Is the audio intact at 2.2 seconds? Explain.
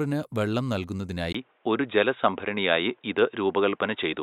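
No, at 2.2 seconds the speech is dull and boxy, cut off above 3.8 kHz, with a level shift and faint new background noise. It starts at 1.33 seconds after a 20 ms gap and runs to the end, likely an input switched to a poorer device.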